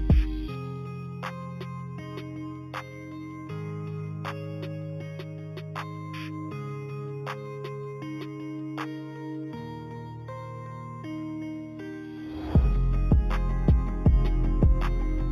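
Throughout the clip there is imaging from linear upsampling. The band stops near 4 kHz, consistent with audio raised from an 8 kHz rate to 48 kHz by straight-line interpolation. A mirrored copy fills 4 to 8 kHz, about 35 dB down, adding a faint metallic shimmer above a dulled top end.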